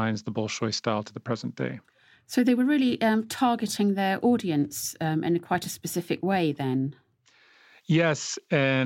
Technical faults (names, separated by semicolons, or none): none